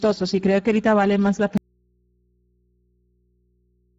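Speech coded with the Speex codec throughout, sounding hoarse and noisy with nothing above 7.7 kHz, which fits a bitrate near 10 kbps. After "ahorita vale más la", an abrupt audio dropout to a faint residue at 1.58 s leaves only hum, around 45 dB down, to the end, likely from the source signal being lost while the path stayed live.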